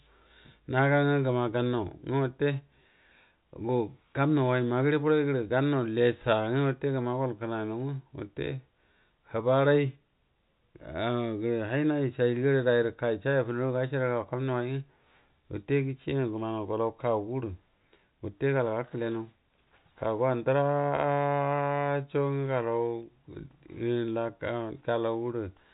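No faults are audible in this telephone-band speech.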